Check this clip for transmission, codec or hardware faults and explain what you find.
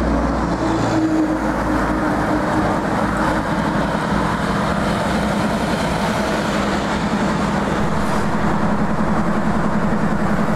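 One hardware fault is audible: a DC step. At 7.80 s the waveform's zero line jumps to a new offset of about -22 dBFS. The offset then holds to the end of the clip. This happens when a converter recalibrates or an input carrying a DC offset is switched into the path. The sudden shift of the baseline is heard as a single low thump at 7.80 s. The sound itself continues unchanged.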